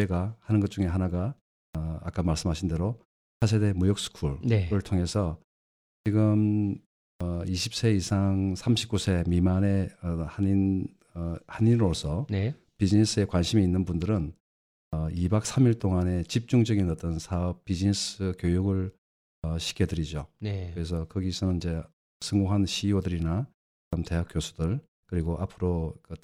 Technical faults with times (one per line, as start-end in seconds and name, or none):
1.68-1.75 clipped start after a pause
3.35-3.42 clipped start after a pause
5.99-6.06 clipped start after a pause
7.13-7.21 clipped start after a pause
14.85-14.93 clipped start after a pause
19.36-19.44 clipped start after a pause
22.15-22.22 clipped start after a pause
23.85-23.93 clipped start after a pause